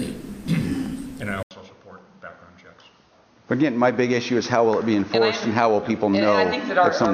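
Input likely switched to a poorer device at 1.43 s: after an 80 ms gap, the sound turns dull, cut above 6.5 kHz, with faint new noise.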